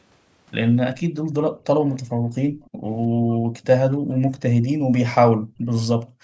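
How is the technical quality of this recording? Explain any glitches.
The speech recording is marred by repeated background dropouts and faint delayed repeats, on a call band that stops at 8 kHz.

Background gated by the echo canceller at 1.49–1.65, 2.12–3.53, 4.0–4.32, 4.78–4.92 and 5.31 s to the end: the canceller clamps the microphone, and room noise sinks up to about 40 dB. These show as dark gaps in the spectrogram's noise floor.

Echo leak at 1.89–2.0, 2.64–2.7 and 5.75–5.86 s: a faint copy of the speech arrives 304 ms late, likely residue the echo canceller missed, and shows as shifted ghost harmonics.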